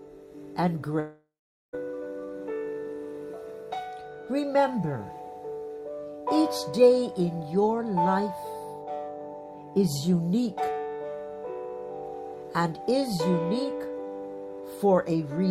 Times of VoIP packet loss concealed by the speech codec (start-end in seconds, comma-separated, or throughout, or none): none